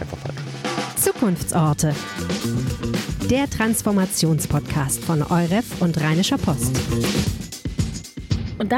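A switching power supply is running in an audible burst mode or beating with another supply from start to finish, producing a switching supply whistle around 2 kHz whose pitch wanders between 1.57 and 2.32 kHz. It sits roughly 35 dB below the sound as a faint, thin, shifting tone.

From 1.02 to 1.70 s, and again from 4.57 to 5.25 s, a scratch defeats the disc's error correction once per revolution, causing CD scratch ticks. Each burst has four evenly spaced clicks, about six a second, the longest lasting roughly 1 ms in the first burst and 1.5 ms in the second.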